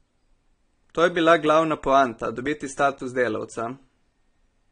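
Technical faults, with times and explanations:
Throughout: AAC compression, likely, with nothing above 9.7 kHz and plainly audible dull, smeared artefacts, which fits a low bitrate near 32 kbps.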